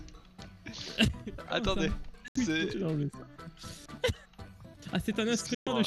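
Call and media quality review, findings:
Digital broadcast dropout: audio mutes at 2.28–2.36 s and 5.55–5.67 s, then resumes with the material in between lost. Receiver likely muted on lost signal or failed frame checksums. Gap lengths fit roughly three and five lost frames.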